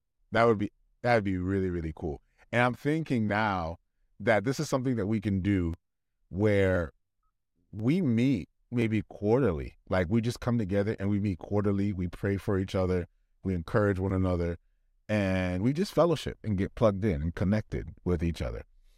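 From 4.72 s to 9.85 s the speech carries periodic USB or driver dropouts. Something blocks the audio path about every 1.02 s. Each time, around a millisecond of samples is skipped outright, so the waveform on either side is spliced together. About seven evenly spaced ticks result, and they are heard only while there is signal. On a waveform each splice is a small discontinuity. On a spectrogram it is a thin vertical broadband line, repeating at regular intervals.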